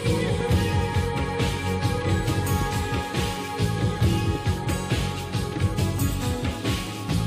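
Overlap between stream segments at 4.01 s and from 5.99 to 6.01 s: adjacent 2-second segments claim overlapping times, so the player trims about 6 and 20 milliseconds of sound, leaving a waveform jump heard as a click or tiny skip.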